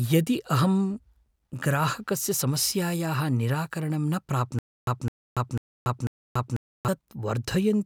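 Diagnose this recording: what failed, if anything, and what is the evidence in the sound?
Stutter with silent gaps, 4.59 to 6.88 s: a 210 ms fragment repeats four times with 285 ms digital silence between, unlike dropouts. Likely a stalled playback buffer.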